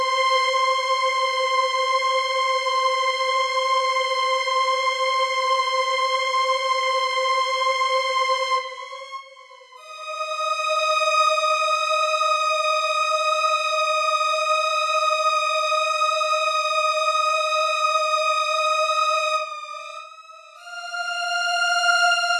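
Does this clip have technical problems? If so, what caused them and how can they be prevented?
Yes. From 5.4 to 7.88 s, a resampler restarted on every block produces a 25 Hz buzz of ticks, one per 40 ms block edge. The pattern fits a 44.1 kHz to 48 kHz conversion that treats each block separately. On a spectrogram, this shows as evenly spaced thin vertical lines. Prevent it by keeping the resampler's filter state running continuously across blocks.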